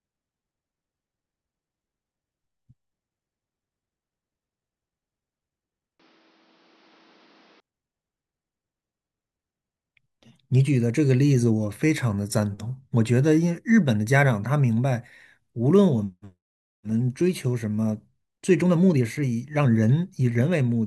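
Speech, with the input switched to a poorer device from 6.00 to 7.60 s: the sound abruptly loses everything above 6.3 kHz, drops roughly 5 dB, and gains a new noise floor well below the speech. There is no gap at either transition. Likely cause: a change of microphone.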